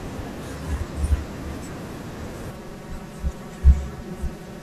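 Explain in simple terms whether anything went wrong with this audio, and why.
From 2.51 s to the end, the speech turns hollow and phasey from channel delay (comb filtering). One channel is about 5 ms late, cancelling fixed tones when mixed. It sounds steady, not like a separate echo.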